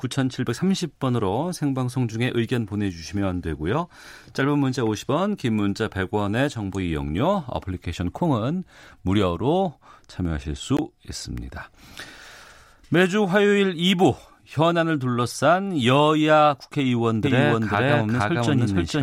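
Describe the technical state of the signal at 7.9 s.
At 7.9 s the signal is intact, with no technical fault audible at that moment.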